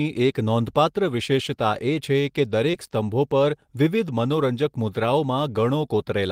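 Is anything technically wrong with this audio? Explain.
Yes. At 2.71 to 2.75 s the speech shows short concealed packet loss: about 20 ms of audio arrived too late to decode, and the receiver synthesized roughly 18 ms by extending the preceding sound before crossfading back, heard as a brief smear or wobble.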